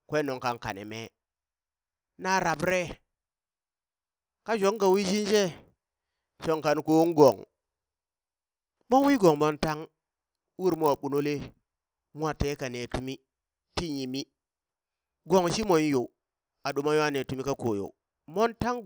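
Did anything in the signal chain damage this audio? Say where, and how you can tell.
Yes, at the sample-rate conversion stage: the resampler restarted on every block. Throughout the speech a faint buzz at 50 Hz rides on the signal and stops in the pauses. That rate matches 20 ms blocks, and the conversion ran from 24 kHz to 48 kHz. Each block was converted alone, so its edges were computed without the neighbouring samples. A spectrogram shows thin vertical lines every 20 ms while speech is present. The waveform shows small discontinuities at each boundary.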